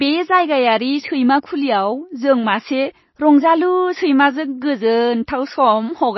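From start to finish the speech sounds watery and swirly, with a plainly audible smear on attacks and nothing above about 5.8 kHz. This is likely MP3 compression starved of bits, consistent with roughly 24 kbps, cutting the treble and zeroing weak frequency lines.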